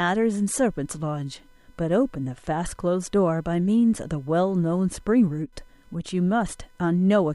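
From start to finish there's computer activity noise riding under the speech: a thin, buzzy whine pulsing at something like 500 times a second, sitting well down at roughly 40 dB below the voice. It comes from the computer's own workload, with processor or graphics load shifts pushing current through the ground the audio circuit shares, so the buzz follows what the machine is doing rather than anything in the speech.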